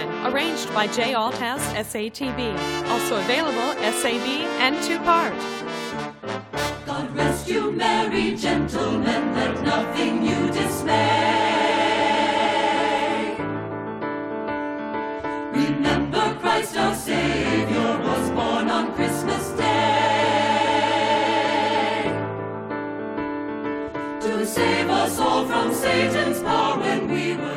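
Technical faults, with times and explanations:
No technical faults can be heard anywhere in this audio. Nothing in it calls for a time or an explanation.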